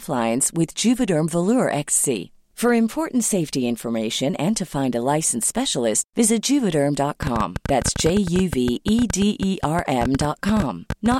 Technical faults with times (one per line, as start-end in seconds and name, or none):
7.23-11.15 train of clicks